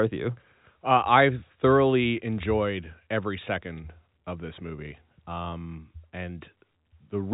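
No technical faults occur at any point in this speech, which is carried over a G.711 telephone path with nothing above 3.8 kHz.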